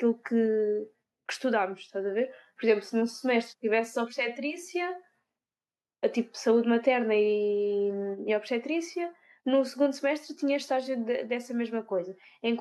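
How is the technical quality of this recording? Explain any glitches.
No glitches or technical faults turn up anywhere in the recording, and the signal holds steady throughout.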